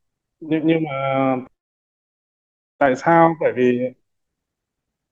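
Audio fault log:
No faults are heard in this speech clip. Nothing in the audio calls for an entry in the log.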